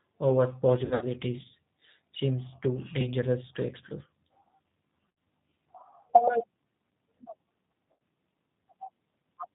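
Speech carried over a G.729 codec at what sounds like 8 kbit/s: the low-rate pulse-based coding removes everything above 4 kHz and leaves the voice plainly rough and synthetic throughout. VoIP packet loss concealed by the speech codec occurs at 0.85–1.06 s, 3.01–3.09 s, 5.10 s and 7.92–7.94 s. The decoder extrapolates lost frames, stretching the sound into a fading buzzy tone or coloured noise, worst at the first point, where gaps scattered over 160 ms include a 60 ms run.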